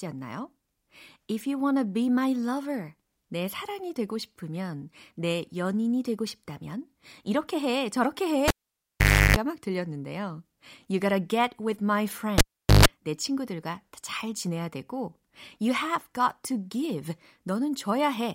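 A cable pulled and plugged in breaks this speech clip twice, at 8.48 to 9.37 s, right after "싶다면 이렇게 해 저렇게" and before "막 들렸는데요", and at 12.38 to 12.86 s, between "gotta get with my" and "내 친구들과 잘 지내야". Each time a pop opens a near-silent gap, 0.84 s and then 0.43 s long, as the live connection breaks. While only the plug tip touches, a 50 Hz mains buzz lasts 0.34 s and then 0.14 s, and a second pop marks the signal returning.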